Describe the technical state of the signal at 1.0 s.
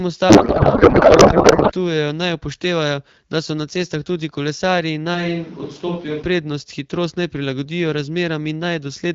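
At 1.0 s you're in a codec payload misread, running from about 0.29 to 1.72 s. The AMR frames were packed octet-aligned but unpacked as bandwidth-efficient, so the decoder pulls fields from the wrong bits and the speech turns into garbled noise and warble until clean audio returns at "naj upoštevajo".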